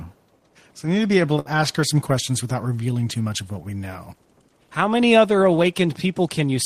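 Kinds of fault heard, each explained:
Burst of packet loss: Between "need to be able" and "ask her some questions", around 1.39 to 1.48 s, several consecutive packets were lost or arrived too late. The receiver papered over about 61 ms by stretching the last sound and letting it fade, a brief held buzz or hiss, and when the audio resumed, about 60 ms of speech was simply gone. Unlike a plain dropout to silence, the gap is filled with smeared, decaying sound, and the speech jumps ahead.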